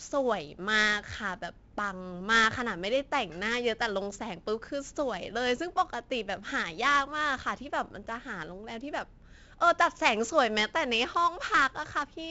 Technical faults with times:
0.00-12.30 4-bit ADPCM compression

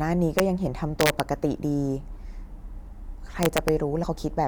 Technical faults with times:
0.39 integer overflow
1.01-1.20 integer overflow
3.43-3.68 integer overflow
4.02 compressed frames skipped

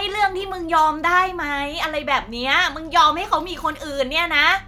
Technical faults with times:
none

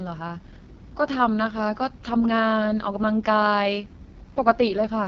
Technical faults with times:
0.00-5.08 AMR wideband (HD Voice) codec

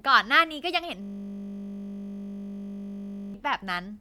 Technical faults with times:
1.02-3.34 system hang loop

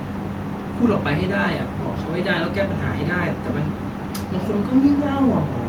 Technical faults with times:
none

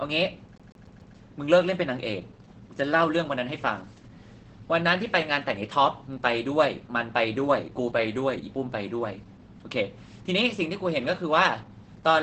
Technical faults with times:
0.00-12.23 Opus voice compression
0.58-1.16 CD stuck on one turn

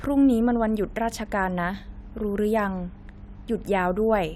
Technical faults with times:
none

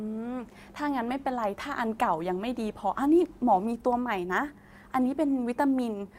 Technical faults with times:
none

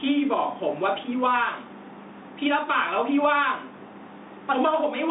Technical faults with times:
0.00-5.10 gain pumping
0.00-5.10 Bluetooth CVSD headset codec

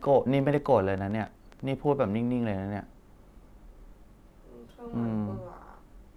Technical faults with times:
0.02-1.61 train of clicks

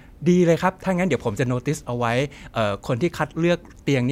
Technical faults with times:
none

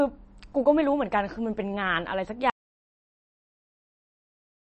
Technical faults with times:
0.00-4.66 MP3 compression
2.50-4.66 audio dropout to silence

